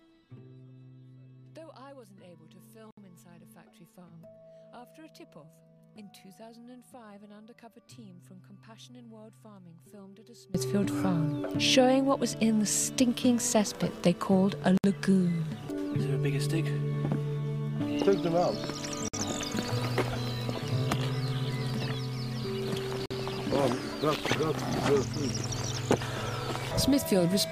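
The audio has two faults. From 0 to 10.55 s, summing to mono cancels the shared centre content and the level falls by about 25 dB, leaving a faint remainder; the likely cause is one channel inverted. Four short silences at joins of separately encoded pieces break otherwise continuous sound: 66 ms at 2.91 s, 65 ms at 14.78 s, 54 ms at 19.08 s and 48 ms at 23.06 s. Each is encoder start delay and end padding left untrimmed, with smeared edges before the sound resumes where it stopped.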